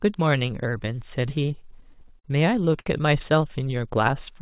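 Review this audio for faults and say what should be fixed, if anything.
Repeated stalls (stutter) occur between 1.65 and 2.25 s. The jitter buffer ran dry seven times, so the receiver extended the preceding sound to fill about 111 ms, roughly 18% of that stretch. The longest gap was 49 ms. Nothing is lost, but the audio drags and hiccups. On a spectrogram, harmonics freeze into short flat smears. On a waveform, the same cycle repeats and sometimes tapers in level. A deeper or faster-adapting jitter buffer would absorb this run of late packets.

A short stall from a late packet follows at 2.79–2.87 s. Packet delay jumped by 70 ms, and the receiver held the last sound for 70 ms until the packet arrived, then continued from the same place. It is heard as one sound lingering too long with a faint buzz or dip. On a spectrogram this shows as a single horizontally stretched block, and on a waveform as a run of near-identical periods. 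Smoothing the network path or allowing more buffer headroom would prevent it.

Throughout the clip the spectrum stops at 4 kHz, which fits the narrowband G.711 mu-law call path.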